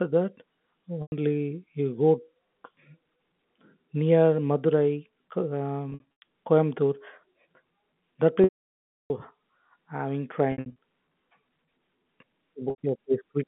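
Packet loss with pitch repetition hits at 1.02, 5.9, 8.44, 10.52 and 12.7 s. Each gap gets patched with a repeated pitch period, so short ones buzz briefly, while the 0.66 s loss at 8.44 s fades out to silence.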